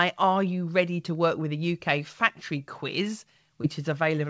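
At 3.62 to 3.65 s there is a short concealed packet loss. About 20 ms of the call audio failed to arrive at the decoder in time, and the receiver patched roughly 14 ms of that gap by extrapolating the preceding sound before crossfading back into the received signal. The result is a brief smear or wobble in the speech. The band stops at 8 kHz, which fits a G.722 wideband call path running at 64 kbps.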